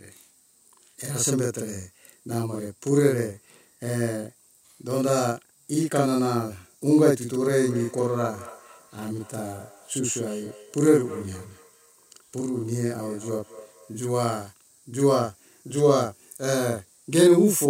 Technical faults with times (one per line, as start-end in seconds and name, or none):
0.00-17.69 channel delay (doubling)
7.39-14.12 feedback echo between two devices